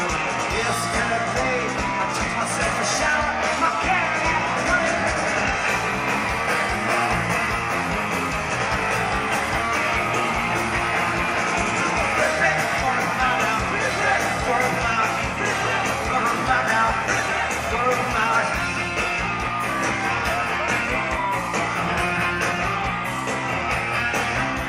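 No technical faults occur at any point in the audio, so there is nothing to describe in time order.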